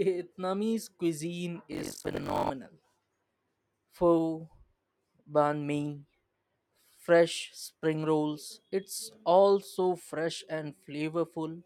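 From 1.71 to 2.52 s the speech picks up a gritty, robotic rattle at about 46.9 Hz. That's buffer tearing, which fits a 1024-sample buffer. The code filling the ring buffer and the hardware draining it have drifted out of step, so they cross mid-period. Something like 40 percent of each buffer ends up holding audio from about a tenth of a second earlier, with hard splices at both edges.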